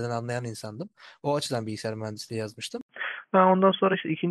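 At 2.81 s the speech drops out for 80 ms, then returns dull and boxy through to the end, with nothing above 3.4 kHz. The level shifts by about 5 dB and a faint new noise floor sits far below the speech. This is likely an input switched to a poorer device, such as a headset call profile. On a spectrogram, the upper band is cut off sharply after a brief blank column. The waveform shows a flat gap, then a step in amplitude.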